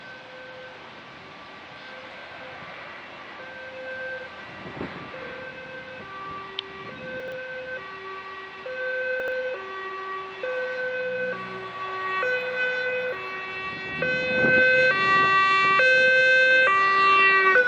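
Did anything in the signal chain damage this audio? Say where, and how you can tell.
Yes. At 7.2 to 7.32 s and again at 9.2 to 9.32 s the sound briefly jumbles, the signature of chunks out of order: a 40 ms buffer chunk played two chunks late, leaving nothing missing but three hard joins each time.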